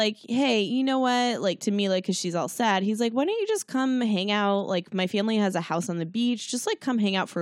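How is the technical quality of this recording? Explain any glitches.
No glitches or technical faults are audible anywhere in the recording.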